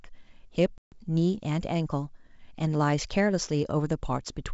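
Right at 0.78 s the speech falls into a hard-edged silence until about 1.02 s. That's packet loss on an ADPCM call: 140 ms gone, around seven packets. The decoder's predictor and step size lose sync with the sender's, so the sound returns slightly distorted before settling.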